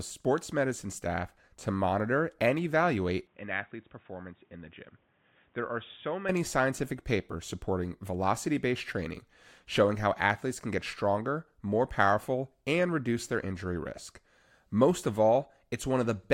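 From 3.27 to 6.29 s the recording system likely switched its input to a poorer device, which would explain a changed frequency response, level and noise floor arriving together. The change happens with no gap at the switch. The speech suddenly loses everything above 3.8 kHz and turns dull and boxy, drops noticeably in level, roughly 10 dB, and picks up a faint new background noise well beneath it. At 6.29 s the fuller sound returns just as abruptly.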